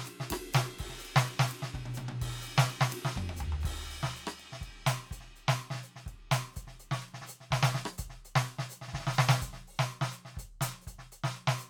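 No technical faults are audible.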